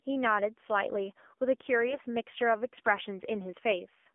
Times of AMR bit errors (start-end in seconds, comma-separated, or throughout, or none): 1.88-2.04